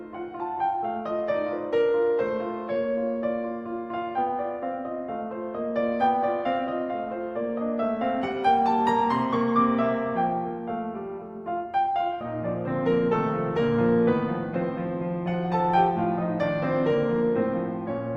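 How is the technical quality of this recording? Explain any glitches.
Nothing goes wrong anywhere in this music recording, so there are no glitches to explain.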